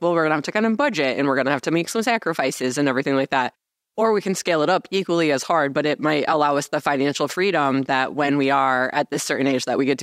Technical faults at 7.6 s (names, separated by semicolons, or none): none